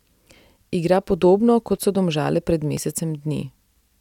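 From 1.77 s to 3.76 s, the speech has periodic USB or driver dropouts. A short piece of audio goes missing about every 0.99 s, so there are roughly three losses in this span. Each gap is around 10 ms. Nothing fills the gaps. The audio on either side is simply joined together. Something blocks the USB bus or the audio driver at a steady interval. Each loss sounds like a small tick or pop, evenly spaced, riding on the speech.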